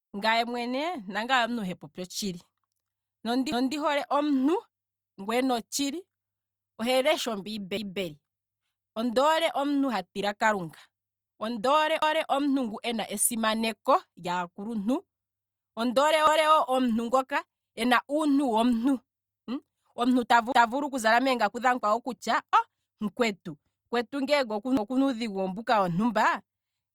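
At 3.52, 7.77, 12.02, 16.27, 20.52 and 24.77 s the speech stutters because of overlapping chunks. Each 4 s block begins 250 ms before the previous one finished, so that slice plays twice. Unlike a dropout, nothing goes missing: the sound repeats.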